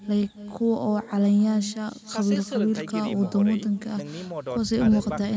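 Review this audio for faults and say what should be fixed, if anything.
Echo with no canceller runs throughout the speech. A quieter, thinner copy trails each phrase by roughly 300 ms, at about 17 dB below the voice. The far end's loudspeaker feeds its microphone, and nothing removes it. Enable acoustic echo cancellation at the far end, or have that side use a headset.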